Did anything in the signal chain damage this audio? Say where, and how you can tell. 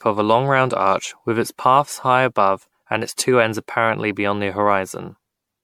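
Yes, at the codec stage. The whole speech clip has generation loss: a swirly, hollow smear and blunted consonant attacks, worse than one mid-bitrate MP3 would cause, with nothing above 19.9 kHz. It was likely re-encoded about ten times, each pass requantising on a shifted frame grid.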